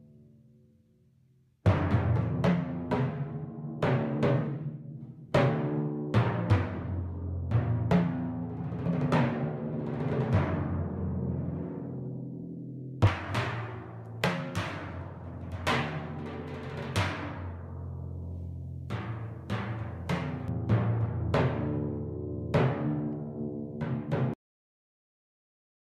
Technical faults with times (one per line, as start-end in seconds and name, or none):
13.07-20.48 pre-emphasis left on
24.34-25.94 cut-off end